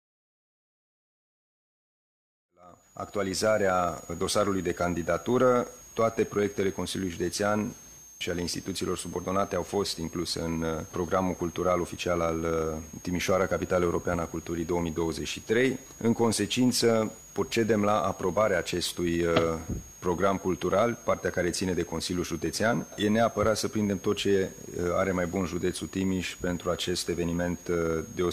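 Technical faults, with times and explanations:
Throughout, switching supply whistle: a thin high whistle sits under everything, wandering between 6.3 and 6.9 kHz and only roughly 20 dB below the wanted sound. It comes from a switch-mode supply dropping into an audible burst mode or beating against another supply, so its pitch shifts as the load changes. It's there even through the gentle fade-in that finishes around 3.74 s.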